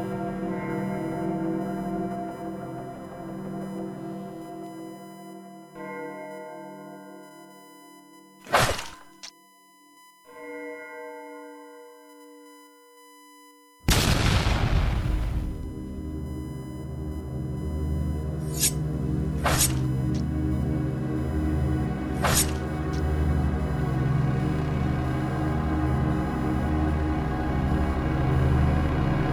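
A thin, steady whine at 1 kHz sits under the sound from start to finish, roughly 30 dB below the programme. This is USB whine: the USB bus draws current in 1 ms frames, and that regular pulsing has leaked into the audio through a shared power or ground path. The 1 kHz repetition rate of those frames is exactly the pitch you hear, which is why the tone stays fixed.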